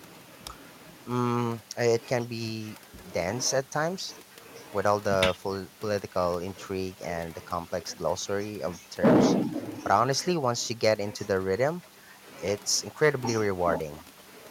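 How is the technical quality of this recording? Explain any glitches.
There is one glitch, a short burst of hard clipping. It runs from 9.04 to 9.33 s, about 0.3 s of the speech. In that stretch the level is driven about 10 dB past what the signal path can carry. The peaks of the waveform are sliced off flat. Those square tops create harmonics high above the real content. You hear it as a harsh, crackly fuzz on the loud parts of that passage.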